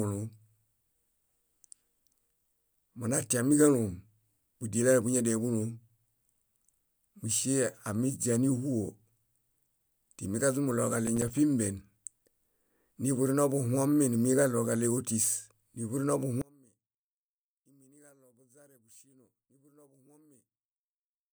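From 11.07 to 11.38 s a gritty crackle tears through the speech, a rapid run of tiny silent dropouts with hard edges. This is processor overload crackle: a handful of audio buffers, each a few milliseconds long, missed their deadlines in succession and were left empty.

From 16.42 s to the end, the speech collapses by about 32 dB, leaving a faint, thin residue. The likely cause is one channel inverted: with one side's polarity reversed, the centred voice common to both channels cancels when they are summed to mono.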